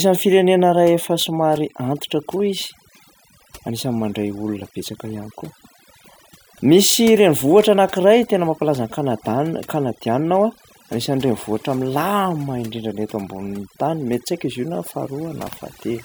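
A speech recording with overdone noise removal throughout: the background collapses to near silence sprinkled with twinkling specks. Unlike a noise gate, which cuts everything at once between phrases, this strips individual frequency bands, eroding quieter parts of the voice itself.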